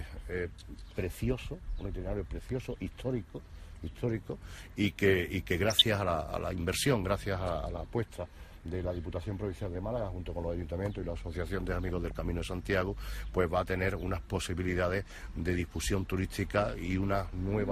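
Throughout, the top end is dull and gurgling, with upper bands flickering on and off in the spectrogram, likely MP2 compression at a rate that points to around 80 kbps. DAB burbling at 5.63–5.82 s and 11.88–12.11 s comes from bit errors corrupting samples and scale factors in the audio data, making short blips and level jumps in single sub-bands that show as isolated blocky bursts.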